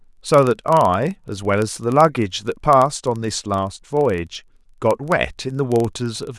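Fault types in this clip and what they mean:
Block size mismatch (padded): One stage hands over blocks slightly shorter than the next stage reads, and the shortfall is filled with silence. Each block therefore carries a tiny gap. Across the whole speech clip these gaps repeat at about 23.4 Hz, heard as a low buzz under the speech. That rate fits a 1024-sample read block. The speech runs at 0.999 times normal speed.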